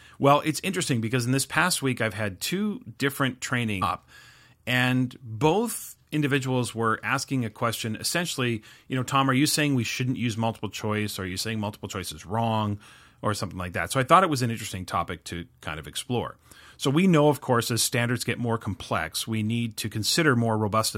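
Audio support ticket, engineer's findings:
Stream segment skipped at 3.81 s, right after "I've had two different". Speech jumps forward abruptly with a brief blip at the join; a stretch of the programme is gone. Likely cause: one segment of the segmented stream failed to load, player advanced to the next segment without that chunk.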